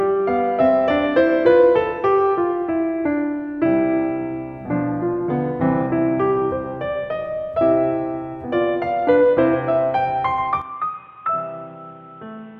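A music clip. At 10.62 s the sound drops abruptly and stays changed to the end at 12.60 s. There is no gap at the change. Above that point nothing reaches past 3.8 kHz, so the top end goes dull and boxy. The level falls by about 10 dB. A new noise floor appears, sitting about 30 dB below the music. This is likely an input switched to a poorer device, a narrower-band microphone with its own noise.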